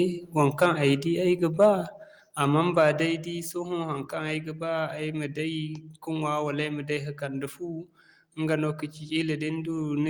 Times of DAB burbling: none

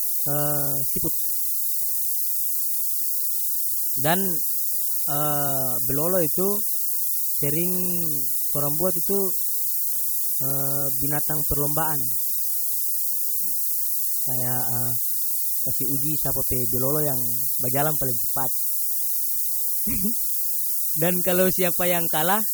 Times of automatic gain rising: none

